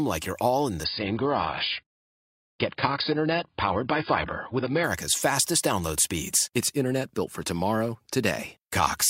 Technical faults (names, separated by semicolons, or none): adaptive stream at a lower bitrate